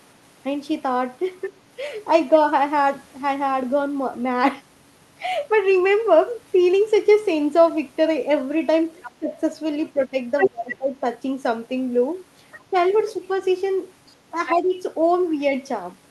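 Around 1.43 to 1.48 s a faint scrap of a second voice sits well under the talker. That is the other side's voice leaking through, most likely because the talker's loudspeaker output reached the microphone and the echo canceller left a residue. The same leak returns from 9.02 to 10.76 s, now about as loud as the talker. It comes back faint from 12.52 to 13.04 s and briefly, a little stronger, at 14.47 to 14.52 s.

From 9.19 to 11.04 s the talker's own voice drops away in pieces, sinking deeply for well over half a second in total, while the leaked voice is present. This is speech suppressed in double talk. The likely cause is that the canceller could not separate the talker from the echo and turned both down. A slight, brief dip follows between 12.7 and 13.19 s, and a sharper one from 14.55 to 14.75 s, each overlapping or just after the leaks.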